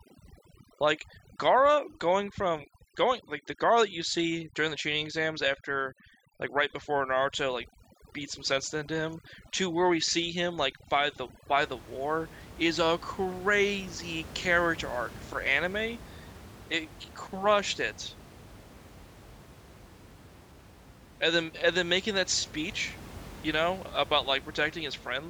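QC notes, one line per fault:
0.00–11.62 s, overdone noise removal: bands near the noise estimate are cut hard, so background drops and twinkles.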